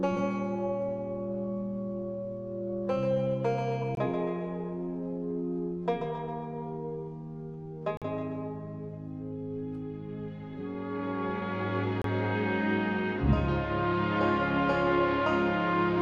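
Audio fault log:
3.95 to 12.04 s, gap between stream segments: three hard-edged holes of silence cut into the sound at 3.95 to 3.97 s (about 21 ms), 7.97 to 8.02 s (45 ms) and 12.02 to 12.04 s (about 26 ms), spaced roughly 4 s apart. Each falls at a boundary between 4-second segments whose time stamps fail to meet, so the player inserts silence to bridge the mismatch. Nothing is missing from the audio; the sound simply resumes late after each hole.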